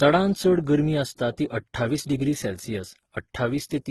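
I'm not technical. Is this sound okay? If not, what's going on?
No. The speech was likely squeezed by one lossy codec and then squeezed again by a second, which is called transcoding between lossy codecs. The second pass wastes effort preserving the first one's damage and then adds its own. Throughout the clip you hear both kinds of damage together. The sound also has nothing above 12.1 kHz, because the lowest cut in the chain stays.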